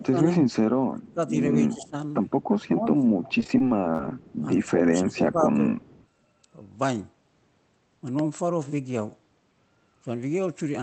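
A speech recording carried over a call path whose sound stops at about 8 kHz, consistent with a wideband Opus setting around 24 kbps, and it has four kinds of fault. From 0.0 to 3.25 s, and again from 4.58 to 5.77 s, the talker is affected by speech suppressed in double talk. The level dips by up to about 20 dB in the first stretch and about 10 dB in the second, with roughly 1.5 s and 1 s of the speech pulled down. This is likely an echo canceller reacting to both sides speaking at once and turning everything down. What separates it from packet loss is that the sound is turned down rather than turned buzzy. Running across 0.51 to 4.71 s, and briefly at 5.8 to 6.06 s, there is an echo leak. A faint second copy of the voice trails the original by a steady 157 ms, about 25 dB below the speech at first and about 30 dB below in the later scrap. The likely cause is residual loudspeaker pickup that the far end's canceller failed to remove. 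The fixed delay and the distinct repeat are what mark it as leaked echo rather than room reverberation, which would smear continuously instead of repeating. Between 3.39 and 4.11 s, repeated packet loss gives a robotic chop. Around ten short holes, none longer than 25 ms, are patched by stretching the preceding sound, and about 15 percent of that span is made up this way. The rapid repetition sets it apart from the smoother level dips of the suppression. Between 8.19 and 8.37 s, two loud pops stand about 10 dB above the signal, likely electrical transients such as a connector or switch glitch. The speech carries on underneath both pops, which shows they are added on top of the audio rather than dropouts cutting into it.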